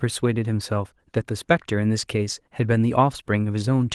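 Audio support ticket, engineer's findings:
No faults found in this speech clip. The Opus voice path at 24 kbps in hybrid mode keeps the full band, with only light coding damage.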